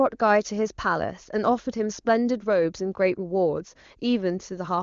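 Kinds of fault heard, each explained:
No faults can be heard in the speech. It passes through the AMR wideband (HD Voice) codec at 23.85 kbit/s, with nothing above about 7.1 kHz and at most faint audible coding damage.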